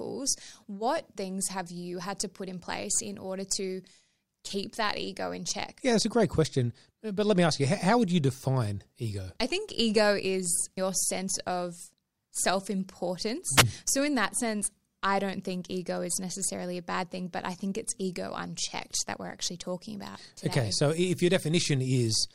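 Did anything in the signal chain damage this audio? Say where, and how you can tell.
Yes, a wireless microphone squelch dropout in the analogue radio link at 13.56 to 13.63 s. Hiss rises as the FM signal fades, then the receiver mutes for about 3.4 ms. Unlike a network dropout, static comes first.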